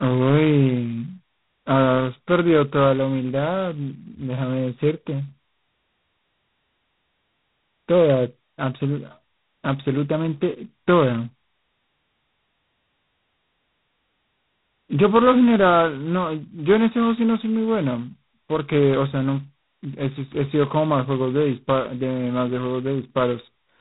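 A harsh, rasping hiss rides on the speech from start to finish, rising and falling with its level, and nothing above 3.9 kHz survives. This is heavy G.726 ADPCM damage: so few bits per sample, consistent with 16 kbit/s, leave coarse prediction errors.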